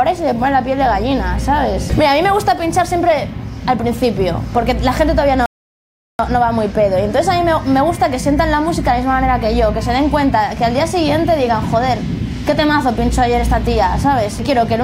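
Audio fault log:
5.46 to 6.19 s, rebuffering stall: playback runs out of downloaded audio and halts, inserting about 0.73 s of silence before resuming exactly where it stopped, so nothing is lost but time is added. The waveform shows a flat gap; the spectrogram shows a blank vertical band.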